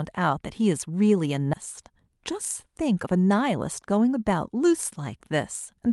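At 1.53–1.55 s a skip ahead drops roughly 0.4 s of speech, so the talk jumps forward with no silence or fill, unlike a dropout, which leaves a gap. From 1.94 to 3.82 s a jitter buffer speed-up trims about a tenth of a second in short pitch-period pieces, so the speech runs 4% faster at unchanged pitch, unlike a resampling error, which would shift pitch too.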